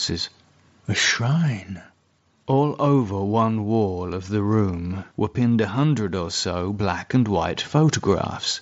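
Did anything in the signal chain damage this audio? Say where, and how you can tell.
Yes. The damage is on the Bluetooth headset link, as concealed Bluetooth headset packet loss at 7.77 s, just after "so black and white". About 7.5 ms of audio is missing, which fits a single lost packet. The receiver filled the gap by repeating a short stretch of the preceding waveform, so it passes almost unnoticed. The mSBC wideband coding on the same link keeps speech bandwidth to 8 kHz.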